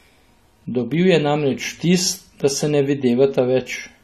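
Throughout, likely AAC compression at a low bitrate, fitting about 32 kbps, cuts everything above 13.8 kHz and smears detail, leaving the speech audibly dull and coarse.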